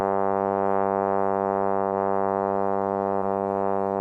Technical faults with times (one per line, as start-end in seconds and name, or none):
1.89-1.93 short concealed packet loss
3.17-3.23 short concealed packet loss